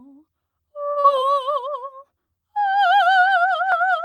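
A music clip with two closely spaced network faults. At 0.91 to 0.98 s a short stall from a late packet holds the current sound for about 45 ms until the delayed audio arrives, then resumes where it left off, so nothing is skipped but everything after sits 45 ms later. Right after, at 1.00 to 1.06 s, short concealed packet loss replaces 40 ms that never arrived with a synthesized continuation. That audio is gone for good, heard as a brief smear rather than a simple hold.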